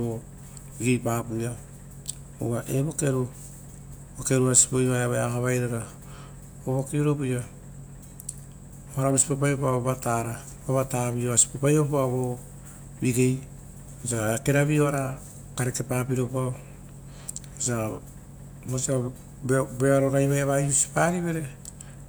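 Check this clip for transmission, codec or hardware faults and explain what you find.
No faults turn up anywhere in this speech recording. Nothing in it calls for an explanation.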